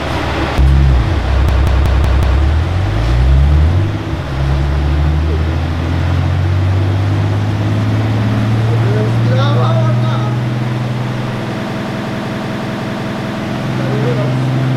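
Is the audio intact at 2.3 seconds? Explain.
No. A system hang loop runs from 1.49 to 2.42 s: a frozen system replays one 186 ms segment five times (5.4 Hz stutter, fitting an 8192-sample buffer), showing as identical repeating blocks.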